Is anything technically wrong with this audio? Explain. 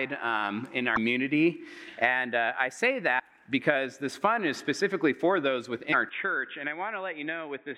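Yes. Two kinds of fault can be heard.

At 0.95, 3.18 and 5.92 s, the sound skips forward, with a brief chirp or burst of noise lasting about 26 to 28 ms each time. This is most likely a broken MP3 bit reservoir. MP3 frames store part of their data in earlier frames. Once a 24 ms frame is lost, the next frame reads the wrong bytes. The decoder then produces a short garbled burst before the stream settles again.

From 6.09 s to the end, the audio suddenly turns dull and boxy. Nothing is heard above 3.8 kHz. The level drops by roughly 5 dB, and a faint new background noise appears. There is no gap at the change. This points to the input being switched to a poorer device, likely a headset call profile or a lesser microphone, which passes a narrower band and adds its own noise.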